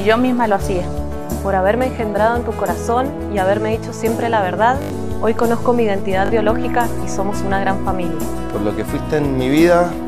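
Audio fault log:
4.82–4.90 s, repeated buffer: a rapid stutter as one short piece of sound replays four extra times with a hard join at each repeat. The audio did not arrive in time, so the last block, which fits a 20 ms buffer, was played again, losing roughly 70 ms.
6.26–6.30 s, repeated buffer: a shorter stutter, with the same piece sounding two extra times and a hard join at each repeat. Again the block, which fits a 20 ms buffer, was replayed while new audio was late, losing about 40 ms.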